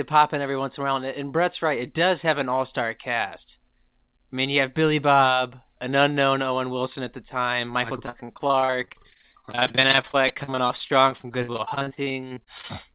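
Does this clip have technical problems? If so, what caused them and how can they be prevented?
Yes. From 8.06 to 12.71 s, repeated packet loss leaves the receiver patching dozens of gaps, up to 56 ms each, by extending prior sound, so about a third turns choppy and robotic. A stable network, or a larger jitter buffer with forward error correction, would prevent it.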